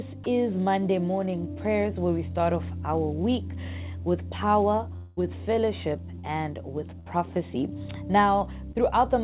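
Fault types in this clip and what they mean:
sound dropped by the voice detector: The sender's voice detector likely judged a quiet moment to be background and briefly stopped transmitting, so the receiver substituted generated comfort noise. At about 0.24 s, a 20 ms slice of the sound is replaced by flat, steady noise, and roughly 10 ms of the real material is lost before the signal returns once transmission resumes.
long network dropout: Audio likely stopped arriving for about 200 ms, and the receiver had to invent a replacement for the whole stretch. From 4.96 to 5.21 s, the last sound is stretched into a continuing buzz or hiss for about 207 ms with no fall to silence. When real audio returns, about 11 ms has been skipped, so the sound jumps ahead slightly.
short concealed packet loss: Small pieces of the stream reached the decoder too late, and it filled each hole by extending the preceding sound and then blending back into the real signal. 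At 6.20 to 6.26 s, 40 ms is lost and heard as a brief smear. At 8.72 to 8.81 s, 20 ms is lost and about 4 ms dropped, giving a quick wobble.
burst of packet loss: Several consecutive packets, about 60 ms of audio, failed to arrive in time to be played. Between 7.00 and 7.08 s, the receiver held the last sound for about 63 ms while lowering its level, so it becomes a short fading buzz or hiss. Playback then resumes further on, with the missing portion gone rather than delayed.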